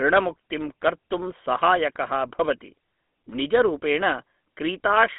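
A buzzy, gravelly roughness runs through the whole recording, and the speech sounds thin and boxed in, with nothing above about 3.8 kHz and a band closer to 200 Hz to 3.5 kHz. This is GSM full-rate codec damage, plainly audible. The codec models the vocal tract and feeds it a sparse train of regular pulses instead of the real excitation, which grinds the voice. That character fits the original 13 kbps GSM coder.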